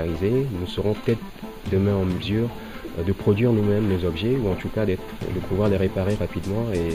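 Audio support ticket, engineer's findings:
No faults found in clip.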